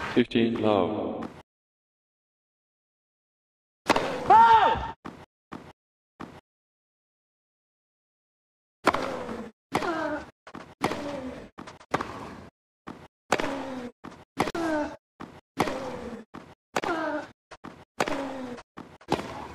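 At 14.50 s and again at 16.80 s the sound drops into a block of digital silence, about 46 ms and then 23 ms long, cutting out and back with no fade. The output buffer likely went unfilled, and the lengths fit 2048- and 1024-sample buffers.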